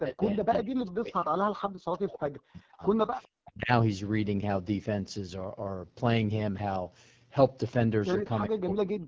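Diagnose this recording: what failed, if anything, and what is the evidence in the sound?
The codec stage failed: the speech went through the AMR wideband (HD Voice) codec at one of its lowest modes, most plausibly 8.85 kbit/s. At that rate the pulse-driven model has too few bits to describe the excitation, so the speech is rough and raspy for the whole clip. Its band stops near 7 kHz, below the 8 kHz top the call microphone processing set, and the highest part comes from shaped noise rather than the real signal.

Speech suppressed in double talk is the likely cause of three level collapses in the call processing stage. From 0.0 to 3.14 s, about 3 s of the talker is pushed down by as much as about 40 dB. The same happens from 3.39 to 3.71 s, for roughly 0.3 s, and again from 8.48 s to the end at 9.07 s, for about half a second. In each stretch the echo canceller's suppressor treated the talker as echo while the far side was also active, so the speech dips, dulls or breaks into pieces.

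An echo leak, likely from a loudspeaker-side echo canceller that did not fully cancel, shows up as a faint delayed copy of the speech from 3.23 to 3.28 s. It trails the original by 405 ms and sits about 35 dB below the speech, so it is heard only as a brief scrap. The leak means the far end's microphone picked up its own loudspeaker and the adaptive filter left that residue in the return path.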